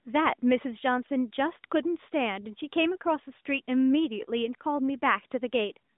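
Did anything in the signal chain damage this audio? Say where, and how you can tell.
No, nothing in the chain damaged this speech: it comes through a narrowband mobile path working as designed, with the AMR narrowband mobile codec confining it to a telephone band of roughly 200 Hz to 3.7 kHz, leaving nothing above about 3.8 kHz, and adding only the light coding texture expected of its higher-rate mode, which fits 12.2 kbps.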